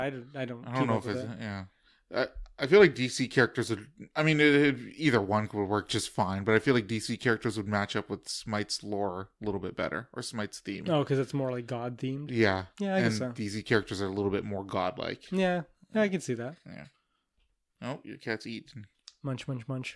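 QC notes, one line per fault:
No dropouts, glitches or level problems were heard anywhere in the speech.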